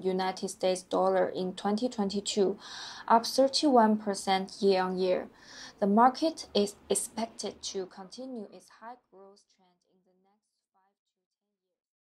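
Nothing stood out on listening, with the sound simply easing away in a smooth fade-out from around 7 s onward.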